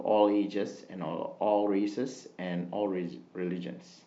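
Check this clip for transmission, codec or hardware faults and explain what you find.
Nothing stood out on listening to this speech clip; I heard no fault to report.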